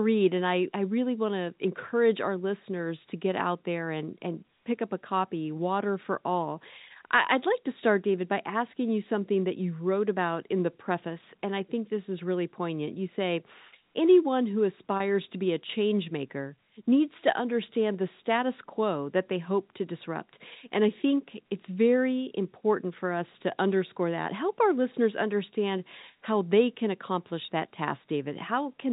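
A brief held, slightly buzzy tone replaces the speech from 14.97 to 15.00 s and again from 27.45 to 27.48 s. Each is packet loss with pitch repetition: about 30 ms went missing, consistent with one lost packet, and the receiver looped the last pitch period across the gap, all heard through the 4 kHz ceiling of G.711 telephone coding.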